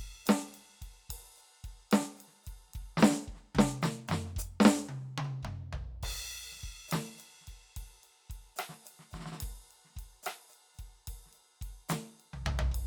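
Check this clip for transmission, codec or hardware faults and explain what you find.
I find no faults in this music clip, so there is nothing to explain.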